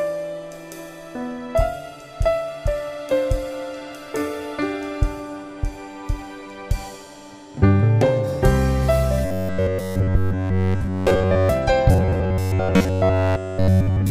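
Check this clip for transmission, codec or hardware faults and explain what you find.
Robotic sound from repeated short buffers occurs from 9.25 to 11.49 s and again from 11.91 s to the end. The sound becomes a rigid, metallic buzz at 93.8 Hz, entirely in the first stretch and for most of the second. The likely cause is a starved stream repeating its last roughly 10.7 ms buffer in place of the skipped audio.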